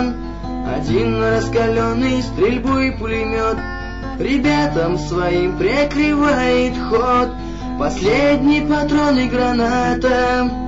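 No technical faults can be heard anywhere in the audio; the signal stays steady and intact throughout.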